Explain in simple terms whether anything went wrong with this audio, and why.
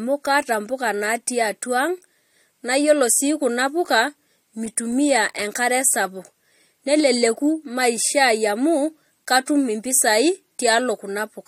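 At about 9.46 s there's pre-echo: a hiss lasting roughly 14 ms arrives just before a sharp sound, softening it. Unlike a click, it leads into the attack.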